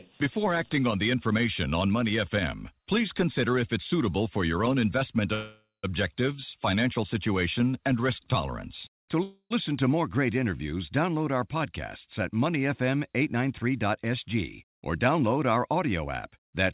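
Call audio freezes at 5.34–5.85 s, just after "for your own investment", and at 9.23–9.52 s, just before "to more great interviews", interrupt this speech recording. In each, the last sound is stretched into a fading buzz that drops to about 130 ms and 60 ms of silence respectively. The likely cause is delayed packets draining the jitter buffer, which inserts roughly 0.49 s and 0.28 s of gap while losing nothing. A jitter buffer speed-up from 13.66 to 16.47 s makes the speech hurried at about 105% speed with unchanged pitch, as the receiver trims pitch-period slices totalling around 150 ms to cut accumulated delay. The narrow band, with nothing above 4 kHz, points to a G.711 mu-law call path at 64 kbps.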